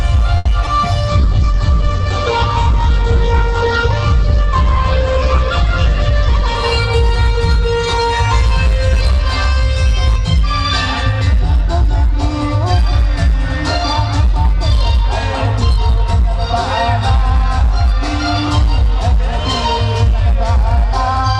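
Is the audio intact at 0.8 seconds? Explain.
No. A jitter buffer slow-down runs from 0.79 to 1.55 s. Repeated pitch periods add 39 ms, so playback drags at 96% speed without changing pitch.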